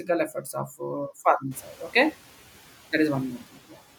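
Noise suppressor catching up, 1.51 to 1.83 s, just after "uh farming": the room noise jumps by about 24 dB around 1.5 s, and the suppressor's noise estimate trails it. The noise bursts through with only about 5 dB of reduction, then sinks over 320 ms as the estimate adapts.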